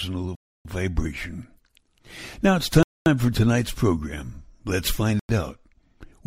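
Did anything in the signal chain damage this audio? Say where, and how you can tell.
Yes. Three dropouts to full silence point to a Bluetooth stall at the wireless playback link: 0.35 to 0.65 s (about 0.30 s), 2.83 to 3.06 s (0.23 s) and 5.19 to 5.29 s (0.10 s). Each gap is clean silence rather than a fade or a burst of noise. This is likely radio interference delaying packets until the receiver's buffer emptied, leaving nothing to play until retransmitted data arrived.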